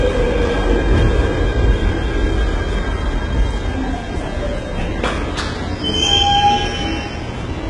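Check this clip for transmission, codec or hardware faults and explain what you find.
One codec fault runs through the whole recording. From start to finish the treble sounds gritty and metallic, with no energy above 11 kHz. This is likely HE-AAC compression at heavy damage, fitting a bitrate around 12 kbps. The upper band is rebuilt from copied lower bands under a coarse envelope, so its harmonics don't align with the real content below.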